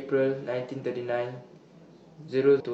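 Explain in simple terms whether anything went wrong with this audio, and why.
Near the very end of the speech, from 2.56 to 2.61 seconds, there's a short, unnatural chirp, squawk, click or brief hole lasting about a twentieth of a second. It comes from damaged data in a compressed stream: a small stretch of the stored or transmitted file was corrupted, so the decoder couldn't read those frames properly. It briefly lost its place, then found it again at the next intact frame.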